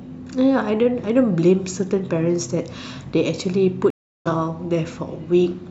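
A stream reconnect occurs at 3.90 s, cutting the speech off into about 0.35 s of silence until 4.27 s. The connection dropped, so the player stopped, re-established the link and started a new decoder partway through the stream. When the speech returns it does not continue where it stopped but jumps ahead by roughly 0.4 s, so a short stretch of the speech is simply missing across the gap.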